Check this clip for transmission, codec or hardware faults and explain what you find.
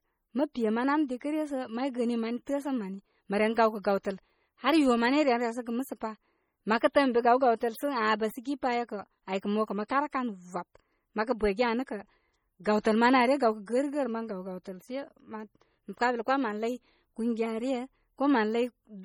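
Two codec faults are present: heavy MP3 compression throughout and two brief pre-echoes.

MP3 compression, likely the cause of the damage throughout, starves the encoder of bits, consistent with about 32 kbps, so weak frequency lines drop in and out, making the speech sound watery and swirly.

Pre-echo at 9.88 s and 12.64 s: the codec smears quantisation noise across its block, so about 15 ms of hiss arrives just before each sharp onset, softening it.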